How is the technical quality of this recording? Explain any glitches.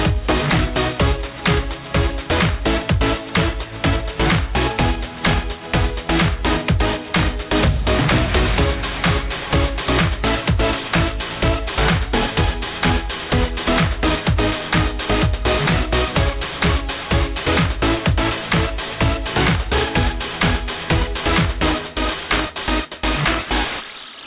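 The quality is compromised by aliasing throughout. Energy above 4 kHz folds back as gritty, metallic tones not far below the signal, pointing to an unfiltered drop to 8 kHz sampling. Unlike a plain low-pass, the highs aren't just removed.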